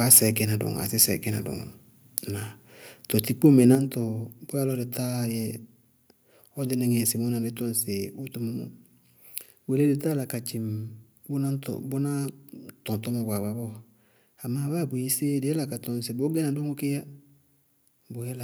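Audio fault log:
0.11–0.18 s, microphone overload: the loudest peaks of the speech are flattened at the converter's ceiling, driven about 6 dB past it, with roughly one sample in twenty clipped. The squared-off tops give a harsh, crackling edge, likely from microphone input gain set too high.
3.75 s, microphone volume stepped down: speech and background fall together by 6 dB in a single abrupt step rather than a gradual fade. This is likely the call software reacting to the earlier clipping by lowering the device's input volume once.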